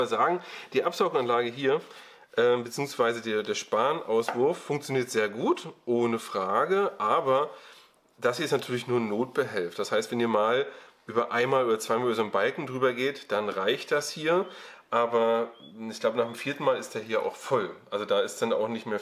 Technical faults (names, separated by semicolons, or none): none